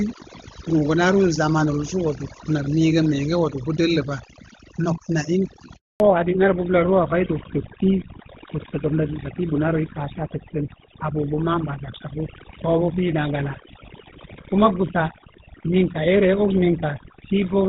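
The background sits at near silence, dotted with small twinkling specks, from start to finish. This is overdone noise removal. A noise reduction stage set far too strong pulled individual frequency bands down or off whenever they came close to its noise estimate, and the quieter parts of the voice were caught along with the noise, leaving hollow, fluttering remnants instead of a steady floor.

At 5.76 s the voice dies away within a few tens of milliseconds and the line stays completely silent until 6.00 s, a dropout of 240 ms. That is a handover gap. The call was being passed from one network to another, and no speech frames reached the receiver during the switch. Whatever was said in that quarter second is gone rather than masked or smeared.

From 6.00 s to the end, the voice turns duller and rougher, and everything above 4 kHz is missing. This is a fallback to narrowband. The call dropped out of HD Voice onto an older narrowband codec, and the rougher texture fits GSM full rate at 13 kbit/s. 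Before the switch, the wideband coding sounded clean, consistent with AMR-WB at its top rate. After it, the missing upper band and coarser coding take away brightness and crispness.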